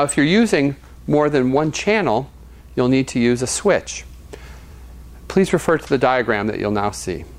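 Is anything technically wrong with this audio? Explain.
No, nothing technically wrong is audible in this audio.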